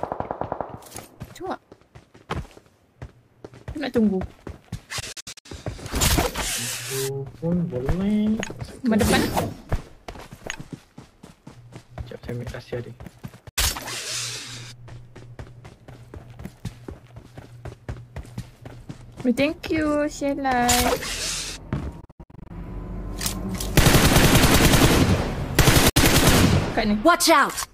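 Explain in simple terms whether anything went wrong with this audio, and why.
The sound briefly cuts to silence at 5.0 to 5.46 s, 13.49 to 13.58 s, 22.01 to 22.51 s and 25.89 to 25.97 s, then resumes as if it had kept playing. The first and third are stuttering clusters of short gaps. This is a Bluetooth dropout, likely from audio packets reaching the headphones too late and being skipped.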